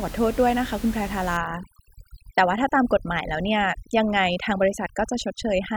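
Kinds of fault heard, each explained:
Overdone noise removal: from 1.37 s on, a noise reducer pushed too hard cuts single frequency bands near its noise estimate, leaving twinkling specks in near silence and taking quiet parts of the voice with them; a noise gate would instead mute the whole signal at once, without the specks.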